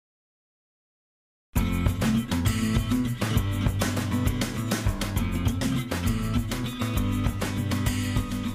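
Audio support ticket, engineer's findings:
Listened through the full recording and nothing stood out as a problem.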